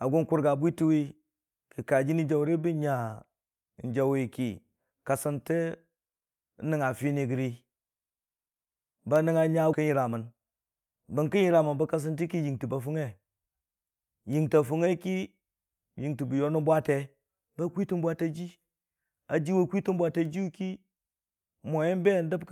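Skip ahead at 9.73 to 9.75 s: the speech lurches forward with no silence and no fill at the join. Roughly seven tenths of a second of audio never plays. That stretch was discarded, either lost in transit or dropped by the jitter buffer when it overflowed while later audio was already queued. The sound on either side of the cut is butted almost directly together, so the loss registers as an abrupt jump rather than a pause.

Jitter buffer speed-up from 9.83 to 11.36 s: right after the jump, the speech runs at about 109 percent of normal rate with its pitch unchanged, giving a slightly hurried delivery. The buffer was holding more audio than its target, likely because delayed packets arrived in a bunch. To shrink that excess delay, the receiver trimmed out short segments a pitch period or a few long, over and over, removing around 150 ms in total.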